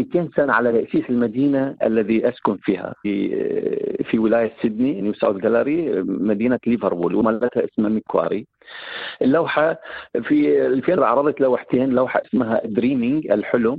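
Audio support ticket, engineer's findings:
Damaged data in compressed stream. Short chirp/blip at 0.70–0.72 s, 3.04 s, 7.20 s, 10.96 s. Decoder misreads corrupted frames, loses sync, resyncs at next header. Spectrogram: thin vertical broadband smear at each time. Waveform: brief spiky discontinuity.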